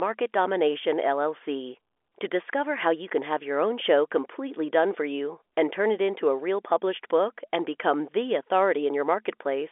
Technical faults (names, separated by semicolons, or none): none